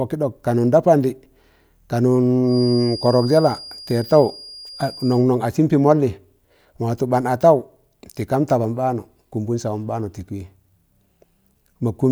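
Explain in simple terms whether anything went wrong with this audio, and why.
A thin, steady high whistle, around 4.8 kHz, sits quietly behind the speech from 2.42 to 5.27 s, swelling and fading slowly in loudness. This is a feedback whistle, likely caused by a loudspeaker feeding back into the microphone, hovering right at the edge of howling without growing louder.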